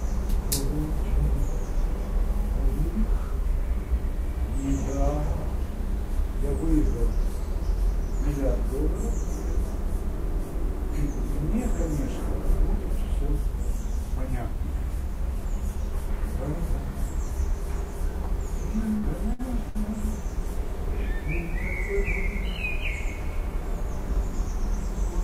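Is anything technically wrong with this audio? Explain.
Yes. Three bursts of packet loss occur, at 18.97 to 19.06 s, 19.33 to 19.42 s and 19.69 to 19.78 s. Each loses 60 ms. The last sound is stretched and faded into a brief buzz or hiss. Then the audio skips ahead.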